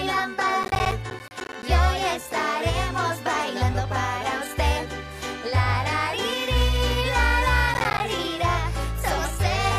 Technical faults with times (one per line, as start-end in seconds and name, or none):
0.63-1.63 processor overload crackle
7.74-8.00 processor overload crackle